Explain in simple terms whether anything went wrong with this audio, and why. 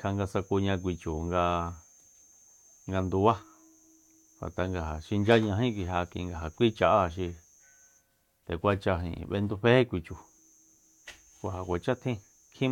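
Nothing went wrong; the recording has no audible faults.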